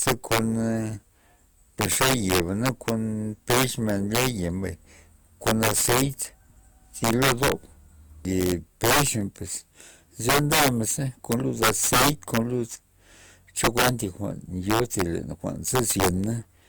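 Throughout the speech, integer overflow: the level runs about 8 dB too hot, and a small share of peaks exceed the largest integer and wrap to the opposite sign instead of flattening. That sign flip gives violent, sharp cracks on loud syllables, far harsher than clipping's buzz.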